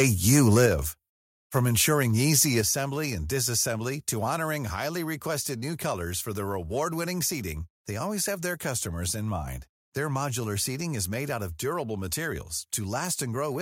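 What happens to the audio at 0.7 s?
Just before 0.7 s the level drops suddenly, at 0.66 s, by about 4 dB, and the speech and background fall together. This is the microphone volume stepped down: the call software, likely reacting to the distorted peak just before, lowered the device's input volume in one step. Unlike a compressor or automatic gain control riding the level, the change is a single instant step with no gradual recovery, and it shifts the noise floor along with the speech.

What triggers it is a microphone overload from 0.31 to 0.66 s. The loudest syllables there push about 5 dB past the converter's ceiling, so a few percent of samples have their tops flattened, giving a harsh, crackling edge. The cause is likely an input volume set too high. This differs from codec distortion or a noisy cable in that the crackle follows only the loudest peaks and ends exactly when the level is stepped down.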